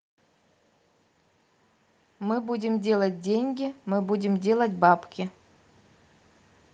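A speech recording with one fault: automatic gain rising. From 2.2 s to 5.12 s the level climbs steadily, by about 7 dB in total. The voice and the background noise swell together, so the room seems to grow louder along with the speaker. The gain control judged the input too quiet and raised its gain slowly over those three seconds. The call codec adds its coding noise and cuts the top end near 12 kHz throughout.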